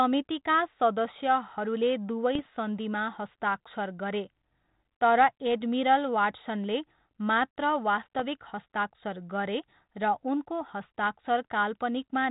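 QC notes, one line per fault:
2.35–2.49 s, bit errors on an ADPCM link: pops and a rough, gritty burst with brief level jumps. Corrupted code bits throw the decoder's step size and predictor off, so each error keeps ringing for some milliseconds. The error rate is around 0.2 percent.
8.16–8.23 s, bit errors on an ADPCM link: a shorter burst of the same clicks and level wobble at about 0.4 percent, heard over the 4 kHz-limited G.726 band at 32 kbit/s.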